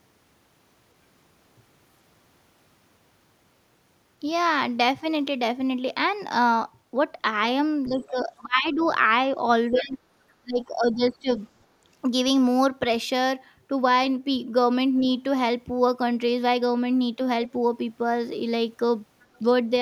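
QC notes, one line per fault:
7.88–8.81 s, speech suppressed in double talk: the speech sinks by about 20 dB in patches adding up to roughly 0.7 s, likely the echo canceller clamping down because it couldn't tell the near talker from the far side.
7.97–8.20 s, other side's voice leaking through: a faint second voice sits underneath, about 30 dB below the speech, likely far-end audio the canceller didn't fully remove.
8.81–8.87 s, other side's voice leaking through: a quick scrap of the far side, around 25 dB down, likely leftover echo as the suppression lets go.
9.70–10.00 s, speech suppressed in double talk: a shorter dip of about 15 dB over roughly 0.3 s, likely the canceller ducking everything during overlap.
9.71–9.79 s, other side's voice leaking through: the loudest leak, only about 15 dB under the speech, likely residual echo slipping past the canceller.
10.39–11.39 s, speech suppressed in double talk: the speech drops by about 20 dB again, roughly 0.7 s in total, likely the same double-talk confusion.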